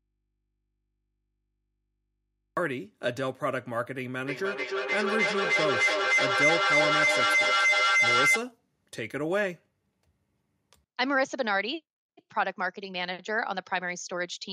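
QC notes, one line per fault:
0.00–2.57 s, audio dropout to a faint residue: the speech is already missing when the clip opens, leaving only mains hum roughly 55 dB below the signal. The signal then snaps back abruptly rather than fading in, so the likely cause is a lost feed into a still-live input.
4.27–8.51 s, feedback howl: a tone around 2 kHz builds up, repeating roughly every 0.3 s as it loops between a loudspeaker and a microphone in the same room. Each trip adds gain, so it peaks about 5 dB above the speech before the loop breaks.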